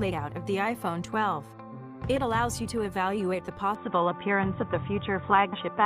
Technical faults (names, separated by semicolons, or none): input switched to a poorer device